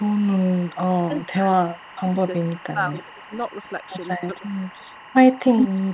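Timecode bleed runs throughout: linear timecode leaking from a neighbouring line adds a steady chirping warble near 1 and 2 kHz, well below the speech, consistent with 23.976 fps code.

Echo leak from 0.0 to 1.27 s, 1.63 to 5.14 s, and 5.58 to 5.92 s: a copy of the speech returns 346 ms late, faint in the first two stretches. The final stretch is louder than the direct speech. This is likely the far end's echo canceller letting its loudspeaker pickup through.

Speech suppressed in double talk from 1.08 to 1.57 s, 1.98 to 2.09 s, and 2.55 to 3.34 s: the speech dips by around 15 dB in pieces, likely because the echo canceller ducked everything while both sides overlapped.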